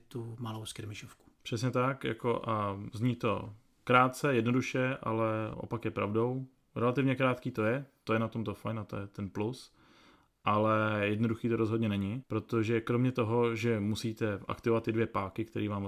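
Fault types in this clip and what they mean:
No fault types can be heard in this clip.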